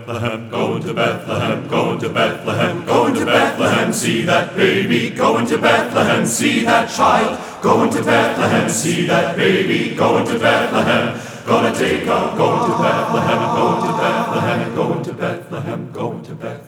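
A doubled audio track runs from 7.7 s to 15.0 s: a second copy of the sound trails the original by about a tenth of a second, roughly 10 dB quieter, giving a flat, slapback-like echo with no decay or room colour, and it starts and stops abruptly. The likely cause is the signal being picked up again through a slower path.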